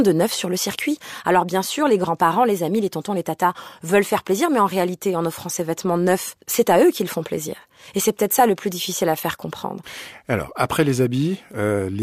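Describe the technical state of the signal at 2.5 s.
At 2.5 s the signal is intact, with no audible fault at that moment.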